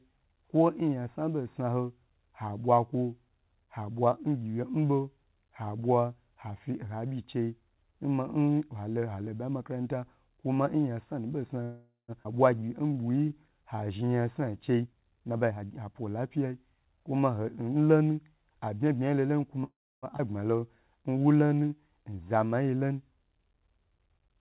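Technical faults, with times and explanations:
11.63–12.11 s, call audio freeze: right after "bayi nmakranta kuma nyansanu" the sound hangs, the last fragment stretching into a fading buzz that ends in about 0.15 s of silence, then resumes where it stopped with nothing lost. This 0.45 s gap was likely caused by delayed packets emptying the jitter buffer, so the receiver extended the last sound until audio arrived.
12.23–12.28 s, skip ahead: playback lurches forward with almost no join, and roughly a third of a second of the speech is gone. With later audio already queued after the stall, a stretch was dropped to win back the delay, and the two sides were butted together.
12.59–14.61 s, jitter buffer slow-down: the speech drags at about 89% speed with unchanged pitch, its sounds drawn out. The buffer was rebuilding its reserve by repeating single pitch periods and bits of pauses, adding about 0.22 s over this stretch.
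14.73–16.88 s, jitter buffer speed-up: the speech turns hurried, running at about 116% speed with pitch intact. The buffer was holding more than its target, so the receiver trimmed many short pitch-period pieces in a row, removing around 0.4 s in total.
19.64–20.05 s, call audio freeze: after "bma yi lo lonu" the sound again stalls into a decaying buzz, with about 0.31 s of it falling silent, before continuing intact. This 0.39 s hold likely came from packets held up in transit that left the jitter buffer dry while the receiver carried the last sound forward.
20.17–20.22 s, skip ahead: a sudden forward jump with a near-seamless splice, and roughly a fifth of a second of speech is missing. Audio was discarded to cut the delay built up by the preceding freeze, joining the two sides almost directly.
20.56–22.29 s, jitter buffer slow-down: the speech slows to about 87% speed with the same pitch, stretched out. 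Repeated pitch periods and pause fragments, about 0.23 s in all, were inserted to refill a low buffer. Throughout, the narrowband call codec leaves nothing above 4 kHz.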